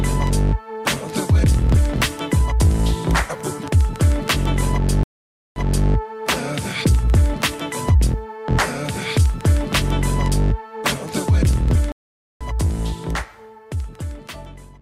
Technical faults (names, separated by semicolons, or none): stream reconnect